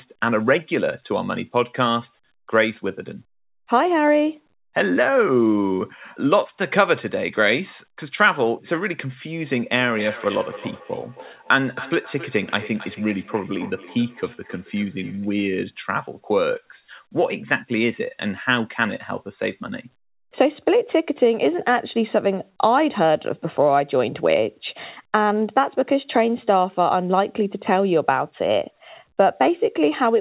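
A speech recording in which, from 9.8 to 15.37 s, each word comes back at a regular interval of roughly a third of a second, the repeats thinner and more ringing than the original and peaking at about 17 dB below the speech. This is feedback echo between two devices: two devices in the same room share the call, one plays back what the other's microphone sent, and that microphone picks it up again. Neither device's echo canceller removes sound played by the other. The audio is also cut off above 4 kHz, consistent with a narrowband call codec at 64 kbps.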